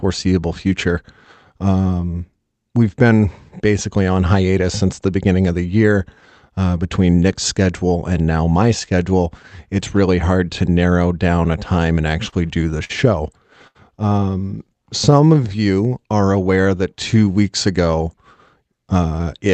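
Around 12.29 to 12.34 s, right after "down a time and", there's a short stall from a late packet: the jitter buffer ran dry, so the receiver held the last sound for about 30 ms before "do the" picks up. It happens again just after "do the" at 12.84 to 12.91 s (50 ms held) and at 13.67 to 13.77 s (75 ms). Nothing is lost, but each spot sounds briefly frozen with a faint buzz or dip.

From 15.14 to 17.34 s there's a jitter buffer slow-down. The buffer was building up reserve by repeating pitch periods, adding 161 ms and running the speech at 93% speed. It drags slightly at the same pitch, with stretched sounds and maybe a mild warble.

At the very end, 19.19 to 19.49 s, a jitter buffer speed-up trims about 40 ms by cutting out pitch periods, pushing the speech to 112% speed, so it sounds a bit rushed. All of this sits on top of the Opus call path, whose top end stops around 8 kHz.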